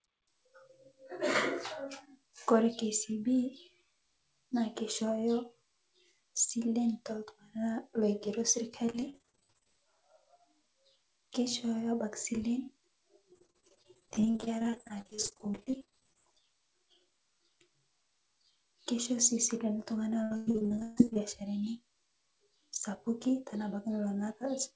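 Speech with repeated packet loss (robotic sound) at 8.86–9.69, 13.32–16.17 and 20.23–21.17 s. Missing packets are concealed by extending earlier audio, which sounds choppy, worst near 20.2 s where gaps reach 140 ms.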